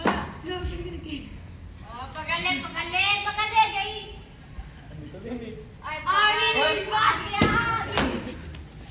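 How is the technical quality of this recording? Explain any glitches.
No technical faults can be heard anywhere in the recording, so there are no glitches to explain.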